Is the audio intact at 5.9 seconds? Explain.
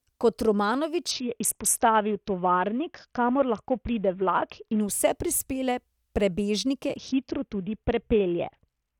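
Yes, the audio at 5.9 seconds is intact, with no fault at that moment.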